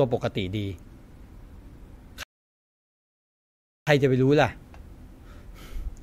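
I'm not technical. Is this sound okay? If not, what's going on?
No. A rebuffering stall hits at 2.23 s: the speech drops to silence until 3.87 s, then picks up exactly where it stopped. The player ran out of downloaded audio and waited for more, so nothing is missing, but about 1.6 seconds of dead air is added.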